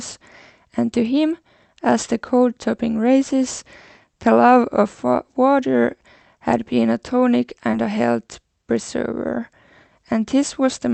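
At 7.71 to 7.75 s, a short concealed packet loss: about 20 ms went missing and about 15 ms was rebuilt from the preceding sound, leaving a brief smear instead of a silent gap.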